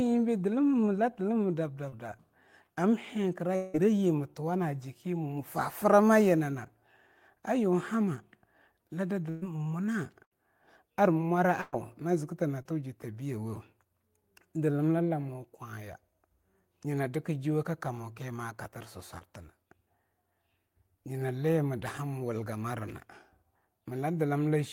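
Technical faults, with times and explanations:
1.89 s, 12.62 s and 19.18 s: short concealed packet loss. About 20 ms of the call arrived too late each time, and the receiver stretched the preceding sound to cover it before blending back. At 12.62 s this comes just before "ta biyawo". Each gap is heard as a brief smear or wobble.
3.56 to 3.76 s: long network dropout, likely. About 180 ms went missing. The receiver carried the last sound on as a fading buzz or hiss across the whole gap, with no silence. The audio then resumes further along, without the lost part.
9.30 to 9.44 s, 10.24 to 10.33 s and 11.61 to 11.74 s: burst of packet loss. Roughly 120, 80 and 120 ms were lost in a row. The first follows "la da". Each hole is filled by the last sound held and faded, then speech jumps ahead.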